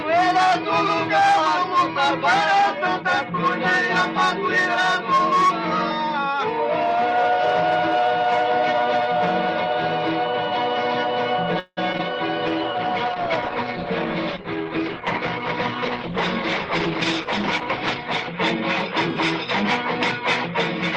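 At 11.59 s a call audio freeze begins, likely because packets stalled in transit and the jitter buffer ran dry. For about 0.19 s the receiver stretches the last sound into a fading buzz that ends in roughly 40 ms of silence. When delivery resumes at 11.79 s the audio carries on from where it stopped, now about 175 ms later than before, so a pause has been inserted without anything being lost.

Shortly after, two short concealed packet losses follow, at 11.93 to 11.96 s and at 11.98 to 12.01 s. In each, data that missed the decoder's deadline was skipped. The first drops about 40 ms and pulls the timing back by around 30 ms as the buffer catches up. The second drops about 20 ms. Each is patched with under 10 ms of extrapolated sound, then blended back into the real signal. The result is a pair of quick smears, with small pieces of sound simply gone.

From 12.47 s to 18.96 s a call bitrate drop takes hold. 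The bandwidth estimate fell, and the encoder was cut from 32 kbps to 13 kbps, staying at that floor for about 5.4 s. Coded that sparsely, the sound turns coarse and watery, with the top end dulled, until the rate climbs back near the 19 s mark.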